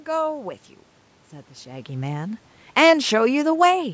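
From 2.62 s to the end, the speech and the room noise behind it sink together by about 3 dB. This is automatic gain falling: the gain control judged the input too loud or its background noise too strong, and gradually lowered its gain, pulling down the background along with the voice.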